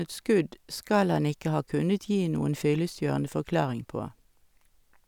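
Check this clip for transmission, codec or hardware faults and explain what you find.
No faults can be heard anywhere in the recording.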